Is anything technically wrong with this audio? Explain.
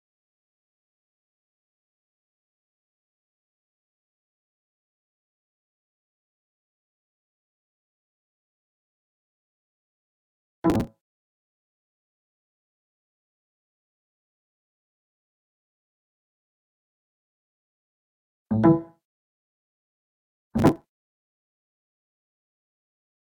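Yes. Processor overload crackle occurs at 10.70–10.87 s and 20.58–21.18 s. Many short buffers, around 5 ms each, miss their deadlines and are skipped, producing gritty crackle.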